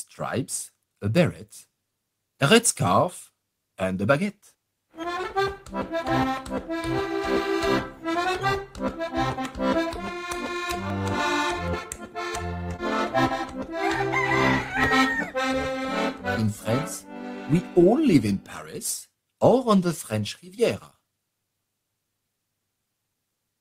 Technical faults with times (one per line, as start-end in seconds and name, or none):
10.90 dropped buffer (overrun)
11.79 dropped buffer (overrun)
12.76-12.80 short concealed packet loss
14.84 dropped buffer (overrun)